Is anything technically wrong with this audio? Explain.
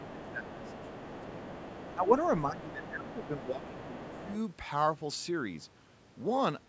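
Yes. This speech clip shows two echo-control faults from a call, both heard while the far end is talking.

Speech suppressed in double talk occurs from 0.0 to 0.9 s, 1.09 to 1.49 s, 1.95 to 2.15 s and 2.44 to 4.29 s. The talker's level sinks by around 10 to 15 dB. The likely cause is the echo canceller failing to tell near-end speech from loudspeaker echo during overlap and attenuating both together.

The other side's voice leaking through is heard from 0.04 to 1.95 s, briefly at 2.23 to 2.29 s, then from 2.58 to 3.46 s and 3.63 to 4.38 s. A second voice sits beneath the talker, roughly 15 to 25 dB down, strongest in the first and last stretches. This is likely residual echo: the loudspeaker feed reaches the microphone and the canceller leaves part of it in the signal. The band-limited character, with nothing above 8 kHz, comes from the call's normal microphone processing.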